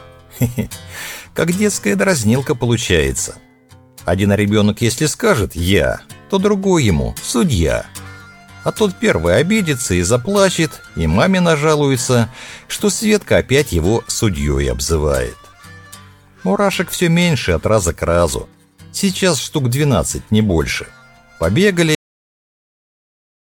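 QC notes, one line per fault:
21.95–23.45 s, cut-off end: the sound stops abruptly at 21.95 s, in the middle of an event rather than after its natural release, and the last 1.5 s are digital silence. The final buffers were never written out, so the signal has no chance to decay. On the waveform, activity ends in a vertical edge followed by a flat line; on the spectrogram, energy across all bands ends at a hard vertical boundary with empty black beyond it.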